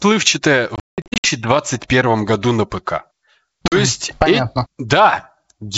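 Hard-edged holes break the speech from 0.76 to 1.28 s, about 360 ms missing in gaps up to 180 ms long, then 40 ms missing at 3.68 s. This is packet loss on an ADPCM call: the decoder's predictor and step size drift from the sender's, so the speech returns briefly slightly distorted.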